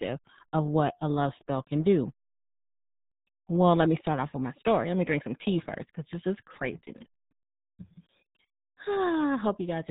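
Throughout, the speech has been squeezed through the RealAudio 14.4 codec, a dial-up era coder whose heavy damage fits an 8 kbit/s rate. Nothing above 3.8 kHz survives, so the voice sounds muffled, with a gargly, bubbling smear over every syllable.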